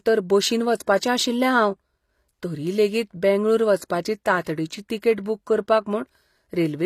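Speech with plainly audible codec damage throughout, likely from HE-AAC compression at a low bitrate, consistent with roughly 24 kbps. Nothing sits above 14.9 kHz, and the treble below that is rebuilt by spectral band replication from copied lower bands, so its harmonics don't line up with the band beneath.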